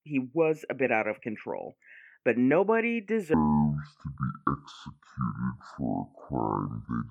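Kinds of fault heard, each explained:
Section at the wrong speed: from 3.34 s to the end at 7.10 s, the recording was likely played back against the wrong clock, running at 0.548 times its proper rate. Because speed and pitch move together here, the speech right after "of control but nobody" abruptly slows to just over half pace and drops by about ten semitones. The voice turns deep, drawn out and sluggish, and stays that way for the rest of the clip.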